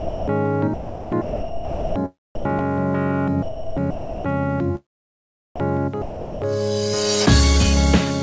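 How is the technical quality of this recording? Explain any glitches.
The recording has a recurring problem: a voice detector at the sending end keeps deciding there's nothing worth sending, so bits of the sound get swapped for synthetic background. The top end stops at about 8 kHz, which points to a wideband call codec like G.722.

Sound dropped by the voice detector happens four times: 0.00 to 0.28 s, 2.35 to 2.45 s, 5.56 to 5.60 s, and 6.02 to 6.42 s. Each time the sound vanishes into a flat, steady hiss and then snaps back. The likely cause is the sender's detector mistaking quiet material for background and going silent, leaving the receiver to fill the gap with comfort noise. The gaps run from 40 ms up to 400 ms.

Sound chopped by the voice detector shows up across two longer stretches, 0.74 to 1.96 s and 3.43 to 4.28 s. Here the detector flips on and off several times instead of dropping out once. 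About 1.1 s of the first stretch and 0.7 s of the second end up as fill. That's likely because the sound hovers right around the detector's threshold. You hear it as choppy.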